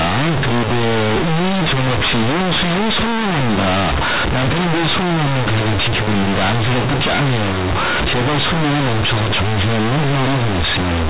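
From start to finish, companded audio is read as linear: A-law bytes play unexpanded as 8-bit samples, so even pauses roar with buzzy noise, unlike clipping, which leaves pauses quiet.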